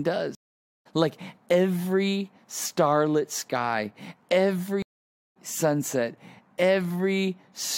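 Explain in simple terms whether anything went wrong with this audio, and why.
The speech cuts out for about half a second at 0.35 s and again at 4.82 s, then resumes slightly further along. That is a stream reconnect: the connection dropped and the player rejoined mid-stream.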